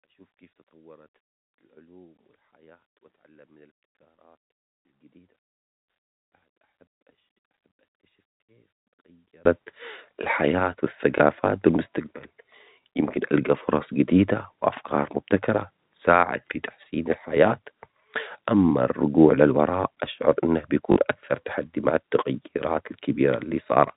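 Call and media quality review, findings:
0 to 9.45 s: speech nearly vanishes in mono, down about 36 dB, faint residue only. Likely one channel inverted, so the two channels cancel when summed. Spectrogram: near-empty across all bands.

11.18 s (20 ms) and 20.92 to 20.96 s (40 ms, fits two 20 ms packets): small blip at 11.18 s, short robotic stutter at 20.92 s. Packet loss with last packet repeated. Waveform: duplicated segment. Spectrogram: 50 Hz buzz in the 40 ms run.

G.711 band limit visible as a hard cutoff at 4 kHz.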